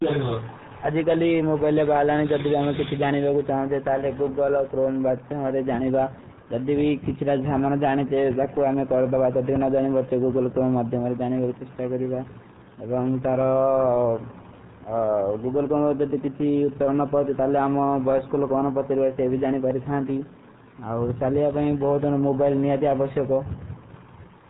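The whole clip runs through the RealAudio 14.4 codec, which fits an 8 kbit/s dial-up stream: nothing above 3.8 kHz survives, leaving the speech muffled and gargly.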